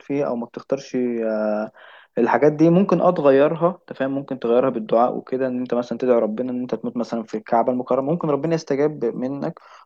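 No technical faults can be heard anywhere in this speech recording.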